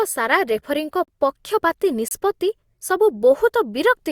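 Gaps between stream segments at 1.04–1.08 s and 2.08–2.11 s: mistimed one-second segment boundaries leave holes of 35 and 28 ms, heard as hard-edged silent dropouts in the speech.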